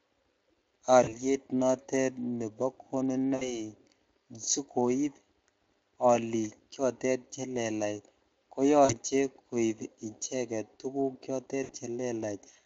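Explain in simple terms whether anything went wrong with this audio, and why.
Four short gaps in the speech show VoIP packet loss concealed by the speech codec, at 1.03–1.17 s (just before "nitet nebo"), 3.35–3.56 s, 8.85–8.95 s (right after "olik chotet chelelach ko") and 11.63–11.74 s. In each, about 40 or 60 ms of data went missing. Instead of silence, as in a plain dropout, the decoder guesses by stretching the last sound into a fading buzzy tone or noise, and the voice stays weak or distorted for a moment afterwards.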